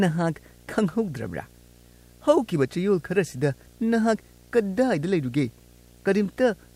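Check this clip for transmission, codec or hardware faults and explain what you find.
A video or display buzz runs under the speech for the whole clip. A screen or video cable is coupling into the audio, adding a 60 Hz field-rate buzz with hash above it, well below the speech. A spectrogram shows harmonic lines at 60 Hz multiples throughout, and the waveform never settles to silence between phrases.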